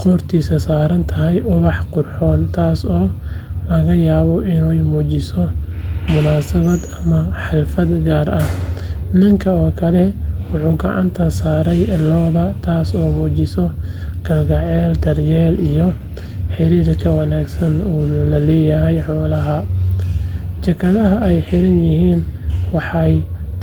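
No technical faults can be heard in this recording.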